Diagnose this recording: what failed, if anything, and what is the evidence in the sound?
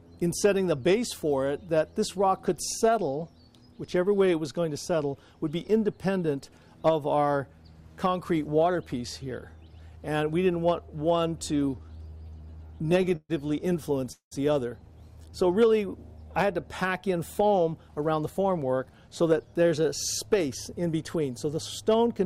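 Network delivery failed first in a run of repeated stalls (stutter) from 11.69 to 13.31 s. Packets kept arriving late, so the jitter buffer repeatedly ran dry and the receiver stretched the last sound to cover each wait. The audio catches 18 times in that span. The longest hold lasts 130 ms, and about a fifth of the stretch is filled-in sound rather than new audio. It drags and stutters, though nothing is actually lost.

A call audio freeze follows at 14.12 to 14.33 s. The likely cause is packets held up in the network long enough to empty the jitter buffer. The receiver fills 194 ms by continuing the last sound, which fades into 100 ms of silence before the audio resumes exactly where it stopped. That inserts a 194 ms gap and adds the same amount to the delay, with nothing missing.

At the buffer stage, a jitter buffer speed-up runs from 17.34 to 19.32 s. Having built up more audio than it aims to hold, the receiver trimmed short pitch-period pieces over and over, removing around a fifth of a second in total. 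The sound plays at 112% speed with its pitch unchanged, so this passage comes across as hurried.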